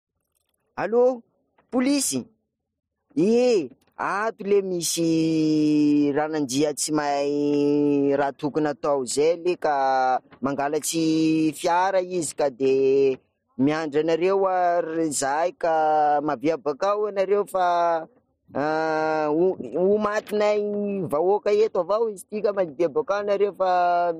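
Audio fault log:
0.29–24.10 s: clock slip clicks, a faint tick roughly every 0.4 s through the speech, about seventy in all, likely from two unsynchronised clocks drifting around 50 ppm apart and slipping one sample each time; the waveform shows single-sample discontinuities, the spectrogram thin vertical broadband lines.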